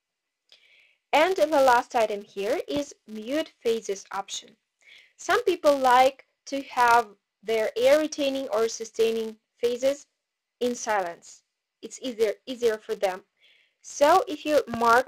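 Throughout the clip, a filter restarted on every block clears its state and begins each block from silence. Each restart leaves a small transient, heard as a steady 200 Hz buzz, which fits 5 ms blocks. The buzz rises and falls with the level of the sound.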